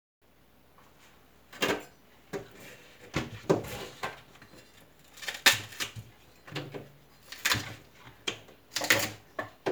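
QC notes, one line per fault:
3.67–5.80 s, crude rate conversion: a gritty, inharmonic fizz rides on top of the sound, strongest on loud and bright moments, with tones that have no musical relation to what is playing. The sampling grid was changed by repeating samples to the nearest point instead of filtering, which fits a jump from 44.1 kHz to 48 kHz. That repeats in a fixed pattern, and the resulting error sits only about 15 dB below the signal.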